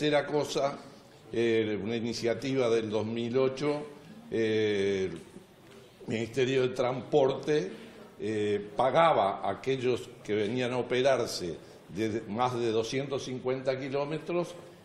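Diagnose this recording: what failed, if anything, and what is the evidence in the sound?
Nothing here points to a failure at any stage, since the sound runs without a single dropout, glitch or other break to trace back to the chain.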